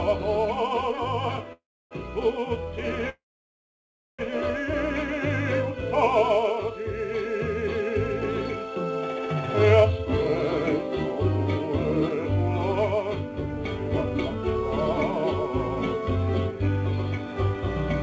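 A call audio freeze at 1.53–1.94 s and again at 3.09–4.22 s: a short fading buzz drops to silence, about 0.31 s and then 1.0 s, before the audio resumes exactly where it stopped. That is likely a stall in packet delivery, unlike packet loss, because nothing is skipped.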